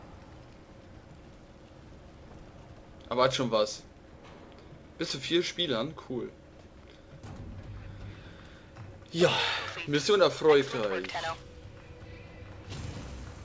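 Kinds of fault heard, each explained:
Nothing stood out on listening; the audio has the band-limited sound of a call path with no content above 8 kHz, and no fault could be heard.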